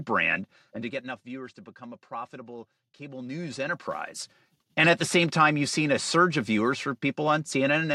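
From 0.38 to 1.28 s and from 3.06 to 4.35 s, zipper noise: the speech level falls, then rises, about 15 dB in unsmoothed 1 dB steps, each clicking audibly.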